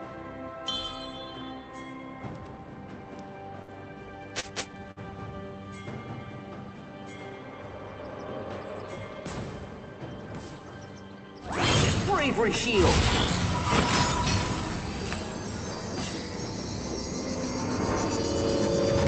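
At 3.62 s a burst of packet loss removes 60 ms of audio. The receiver fills 59 ms by holding the last sound and fading it, then jumps ahead. At 4.40 s and 4.91 s, short stalls from late packets let the jitter buffer run dry. The preceding sound is stretched by 35 ms and 51 ms, then continues with nothing missing. All of this plays through an Opus call path band-limited to about 8 kHz.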